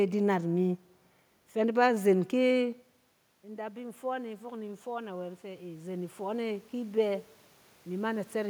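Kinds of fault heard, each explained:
Automatic gain rising: Near 2.5 s the talker moves away, and the level at the microphone drops by about 15 dB. The automatic gain control reads this as a quiet input and slowly turns itself up. From 3.42 s to 7.31 s the gain climbs by about 9 dB. The voice swells back over nearly four seconds. The room noise swells with it, since the control lifts everything it hears.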